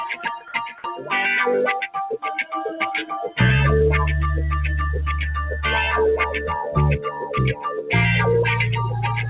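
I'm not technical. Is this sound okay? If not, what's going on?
No. Throughout, the level gently rises and falls and held sounds seem to thin out. That's a noise suppressor applied to music or sounds: a filter built for speech mistakes steady tones and lingering tails for background noise and keeps turning them down a little.

From 0.14 to 1.12 s, and again from 3.03 to 3.39 s, the sound drops away sharply, as if someone briefly pulled the volume right down. This is sound cut by the noise suppressor: it judged these stretches to be noise and pushed them much lower than the rest.

At 0.82 to 0.84 s, a sound begins abruptly, missing its soft start. This is an onset clipped by the voice detector, likely caused by the sender's system being slow to notice that sound had resumed, so those first moments never got sent.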